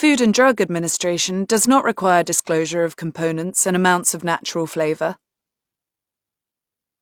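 No technical faults are audible.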